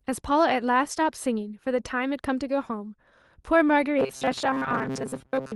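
From 3.99 s to the end at 5.55 s, fresh audio was likely arriving too rarely, so the playback kept looping a tiny slice of what it already had while most of the real signal, roughly two thirds or more, was skipped. The result is robotic sound from repeated short buffers. The speech collapses into a stiff metallic buzz locked at 133 Hz, which fits a repeated slice about 7.5 ms long, and it only loosely tracks the original speech.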